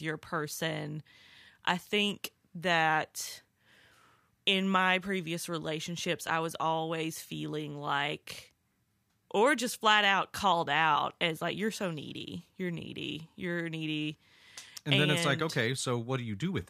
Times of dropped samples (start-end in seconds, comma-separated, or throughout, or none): none